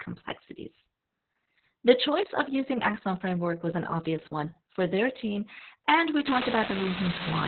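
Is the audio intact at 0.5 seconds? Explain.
No. At 0.5 s the speech sounds muffled, hoarse and slightly robotic, with nothing above 4.3 kHz, throughout the clip: Opus voice compression in narrowband SILK mode, which fits a very low bitrate of about 6 kbps.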